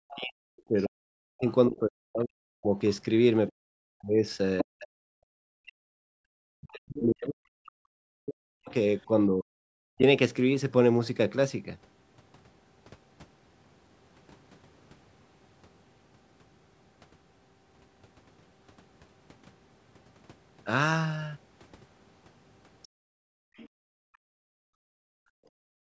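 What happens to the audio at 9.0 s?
At 9.0 s the speech is inside a long stretch of speech suppressed in double talk, running from 0.0 to 10.02 s. The level falls and recovers, dropping by up to about 40 dB. Roughly seven seconds of the span are affected. The likely cause is both sides talking at once, so the echo canceller could not tell its own talker from the loudspeaker echo and turned everything down.

Right there, from 9.01 to 9.05 s, the other side's voice leaks through. It is a brief scrap, very faint, about 40 dB below the speech. This is likely echo from the loudspeaker that the canceller failed to remove from the microphone.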